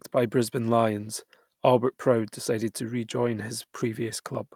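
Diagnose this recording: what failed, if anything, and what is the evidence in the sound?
Nothing in this recording stood out as a fault on listening.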